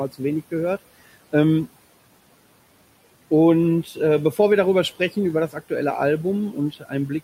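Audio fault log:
6.52–6.93 s, speech cut by the noise suppressor: the sound turns faint and swallowed, dipping about 12 dB, because the suppressor mistook it for background noise.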